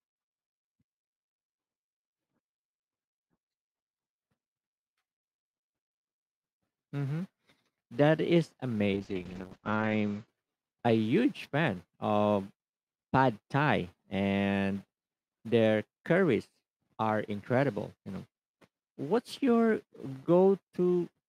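Speech with a call bitrate drop from 8.95 s to 10.33 s: the encoder rate falls from 48 kbps to 9 kbps, holds at its lowest for about a second, then recovers. Audio bandwidth narrows from 20 kHz to 8 kHz, so the sound turns muffled and coarse. Unlike packet loss, there are no gaps, clicks or stutters; unlike a steadily low-quality codec, both the dullness and the roughness come and go within this stretch.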